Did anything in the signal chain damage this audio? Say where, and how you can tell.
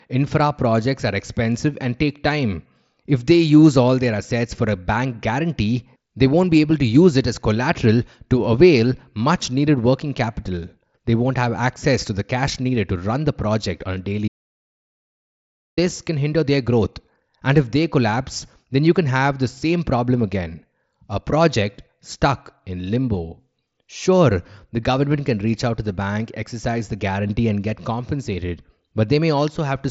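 Yes. An audio dropout to silence runs from 14.28 to 15.77 s: the speech stops mid-flow, leaving 1.49 s of silence with no room tone, then resumes. The waveform flatlines and the spectrogram shows an empty column across the mSBC band, which tops out near 7.7 kHz. The likely cause is a lost input link or mute upstream while the recorder kept writing silence.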